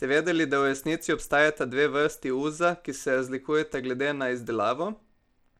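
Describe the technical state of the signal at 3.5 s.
At 3.5 s the speech is still carrying what is likely Bluetooth SBC compression, present across the whole clip. Starved of bits, the codec drops its upper sub-bands and coarsely quantises the rest, which fits about 96 kbps. Plainly audible: treble flickers away under gritty, aliased grain.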